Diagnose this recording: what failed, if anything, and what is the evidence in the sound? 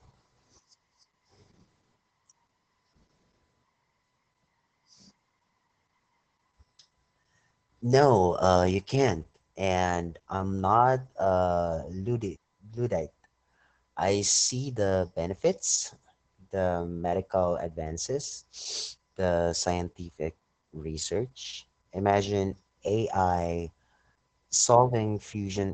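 Opus voice compression is the failure, present for the whole clip, at the codec stage. Nothing in the speech reaches above about 9.2 kHz, so sibilants sound dull, and the voice comes across muffled, hoarse and faintly robotic. That points to the SILK linear-prediction coder running in wideband at a very low rate, consistent with roughly 10 kbps. At that rate the excitation is coded coarsely, which roughens the voice's texture and produces the heavy damage heard here.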